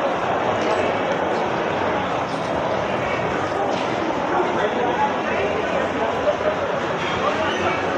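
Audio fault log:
7.17–7.19 s, loud pop: a single sharp pop rising a few decibels above the sound, which continues underneath, likely from a brief voltage pulse such as a switch or static discharge.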